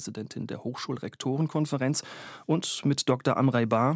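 Automatic gain rising runs from 1.22 to 3.56 s: the call's gain control judged the input too quiet and raised its level gradually over more than two seconds, so the speech and background swell together by about 5 dB. The call's microphone path stays band-limited to 8 kHz.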